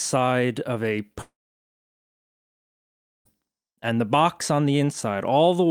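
At 1.21 s the speech cuts into a fading buzz, then near-silence until 3.27 s. This is likely a long network dropout; about 2 s is lost.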